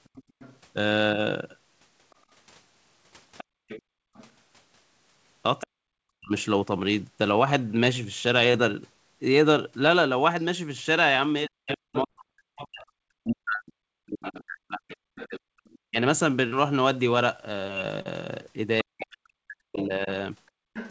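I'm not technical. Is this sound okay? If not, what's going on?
No. A faint second voice runs underneath from 0.04 to 6.44 s, 10.41 to 15.78 s, and from 19.74 s to the end. This is the other side's voice leaking through, likely because the speaker's loudspeaker got into their microphone. It is a separate, quieter voice, not a distortion of the main one.

The background gated by the echo canceller shows up as the room sound briefly vanishing at 0.27 to 0.35 s, 3.44 to 4.14 s and 20.52 to 20.63 s.

Speech is suppressed in double talk at 1.15 to 1.21 s, 5.63 to 6.32 s and from 11.47 s onward. The speaker's own voice sinks or chops away, likely because both sides talked at once.

Short concealed packet loss causes tiny smears or wobbles at 8.52 to 8.56 s, 12.08 to 12.11 s, 16.47 to 16.54 s and 18.02 to 18.07 s. These are brief patches of filled-in sound from missing data, and each lasts only a few hundredths of a second.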